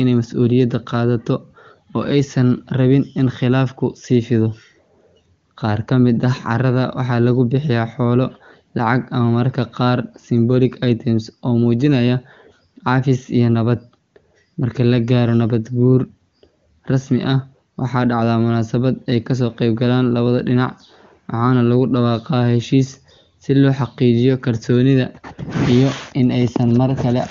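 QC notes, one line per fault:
No faults are heard in the speech. The AMR wideband (HD Voice) codec leaves at most a faint trace, which fits one of its highest rates, such as 23.85 kbit/s, with the top of the band ending near 7 kHz.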